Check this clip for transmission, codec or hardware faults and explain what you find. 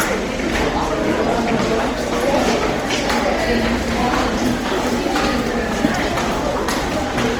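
There's one fault, and it runs through the whole clip. Opus compression is the likely cause: grainy, rough, noisy texture on tonal parts, full bandwidth to about 20.2 kHz, consistent with CELT mode near 24 kbps.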